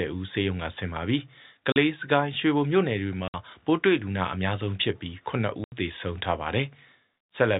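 Packet loss filled with silence chops the speech three times: 40 ms at 1.72 s, 60 ms at 3.28 s and 80 ms at 5.64 s. Each gap is a multiple of 20 ms, which fits 20 ms packets. Silence replaces the lost audio.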